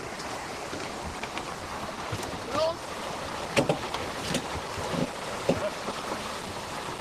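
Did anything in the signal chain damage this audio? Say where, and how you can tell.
No, nothing in the signal chain stood out as damaging this audio when I listened to it.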